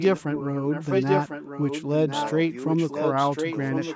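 A speech recording from a call in which the far end's echo canceller likely failed to remove all of what its microphone picked up from its loudspeaker, so the leftover was sent back. The result is an echo leak: a delayed copy of the speech arrives about 1.05 s behind the original and only about 5 dB quieter, running from the start to 2.31 s and again from 2.65 s to the end. The call's microphone path passes nothing above 8 kHz.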